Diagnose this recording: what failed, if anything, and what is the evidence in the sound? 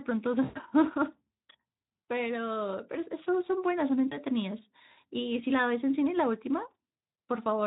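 VoIP packet loss concealed by the speech codec at 0.43–0.58, 4.07–4.18 and 6.93–6.95 s, a network fault: the Speex decoder extrapolates lost frames, smearing speech into fading buzz.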